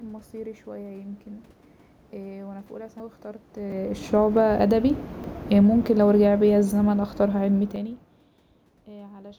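At 3.0 s the speech is interrupted and the sound jumps forward, skipping roughly a tenth of a second with no gap of silence. This is a dropped buffer (overrun), and the likely cause is that the recording software did not read its samples before the hardware overwrote them, so the sound on either side of the lost stretch is spliced together. The same jump recurs at 3.72 s (around 70 ms lost) and at 5.24 s (a few tens of milliseconds).

From 5.43 s to 7.98 s the speech and the room noise behind it sink together by about 7 dB. This is automatic gain falling: the gain control judged the input too loud, or its background noise too strong, and lowered its gain gradually. Unlike the level changes near 3.5 s and 7.5 s, where the talker moves relative to the microphone, the background drops along with the speech. During this fade, at 7.76 s, another short overrun skips a few tens of milliseconds.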